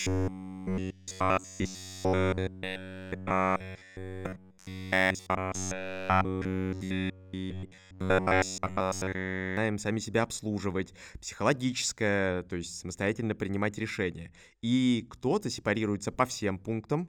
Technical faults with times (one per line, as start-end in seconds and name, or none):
0.01-9.57 robotic sound from repeated short buffers